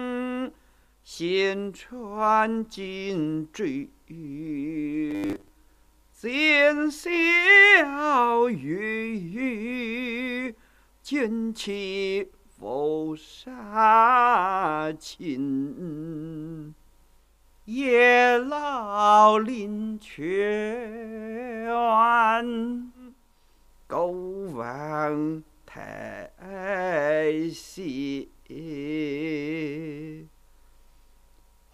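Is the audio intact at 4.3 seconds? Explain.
Yes, at 4.3 seconds the audio runs on without any dropout, click, distortion or other break.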